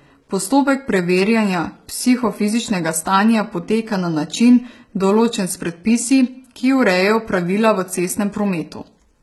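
HE-AAC compression damage runs through this speech clip from start to finish, and it is heavy. The treble sounds resynthesised rather than captured: above the crossover, copied lower bands fill the top, so s sounds come out gritty and metallic. This likely stems from a very low bitrate, around 16 kbps.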